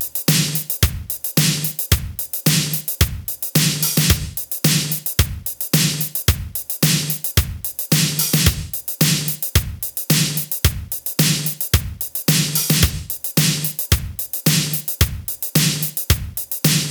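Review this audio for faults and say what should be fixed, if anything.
Nothing here needs fixing, as no faults turned up anywhere in the recording.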